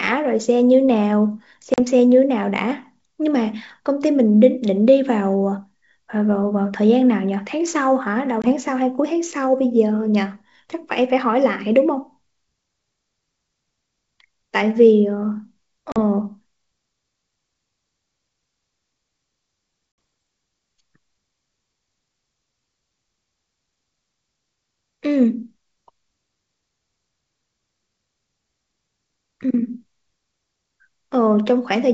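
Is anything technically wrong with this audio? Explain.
Yes. At 1.74, 8.42, 15.92 and 19.92 s the speech drops into hard-edged silent gaps of 40, 20, 40 and 60 ms, returning with brief roughness. This is packet loss on an ADPCM call: the decoder's predictor and step size desynchronised during each hole, briefly, over G.722 wideband coding at 64 kbit/s.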